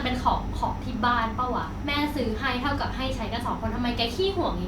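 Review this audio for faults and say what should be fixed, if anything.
Nothing stood out on listening to this speech recording, so there is nothing here that needs fixing.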